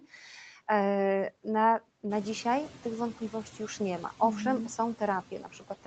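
Noise suppressor artifacts run throughout: the suppressor pulls steady noise down by about 11 dB between phrases, and the room noise rises by about 13 dB around 2 s.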